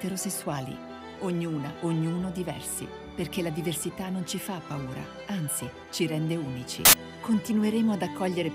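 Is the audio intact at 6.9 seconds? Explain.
No. From 6.85 to 6.93 s, samples are built from the wrong bytes. Misassembled bytes push the fast-changing low bits into each value's large part, producing a burst of loud, harsh broadband noise.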